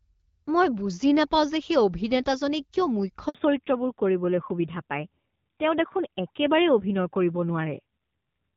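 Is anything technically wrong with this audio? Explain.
Yes. At 3.29 s the call switched networks and no speech frames arrived for 60 ms; this handover gap makes the sound die away to silence until 3.35 s.

From 3.35 s onward the call fell back to narrowband, a switch from the light-coded HD Voice sound to what points to AMR-NB near 7.4 kbit/s. Nothing above 4 kHz survives, so speech turns duller and rougher.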